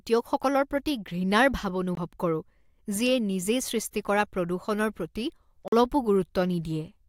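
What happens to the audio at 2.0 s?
Just before 2.0 s, from 1.95 to 1.97 s, the speech cuts to about 21 ms of clean silence and then carries on, likely a Bluetooth stall: delayed packets let the headphones' buffer run empty. Unlike a codec dropout, there is no smeared or synthesized fill, only a brief gap.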